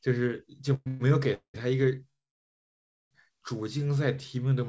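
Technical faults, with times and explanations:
0.74 to 0.88 s, 0.88 to 1.02 s, 1.34 to 1.56 s and 2.10 to 3.13 s, call audio freeze: packets were likely held up in transit and the jitter buffer ran dry. The receiver stretched the last sound into a fading fill, and after the longest wait it fell to near silence for almost a second. Playback then resumed where it stopped, so each stall adds a gap, from 120 ms to about 1 s, with nothing missing.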